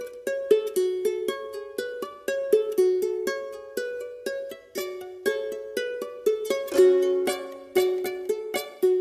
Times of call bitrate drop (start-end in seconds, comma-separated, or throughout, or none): none